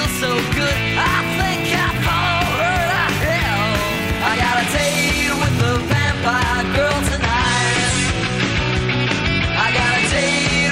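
At 7.12 s the audio switches abruptly to an adaptive stream at a lower bitrate and stays there until the end. There is no gap, just an instant loss of quality. Everything above 10.5 kHz disappears, so the top end goes dull, and coding artefacts become audible. That sound fits a player falling back from roughly 128 kbit/s MP3 to about 40 kbit/s after the connection slowed.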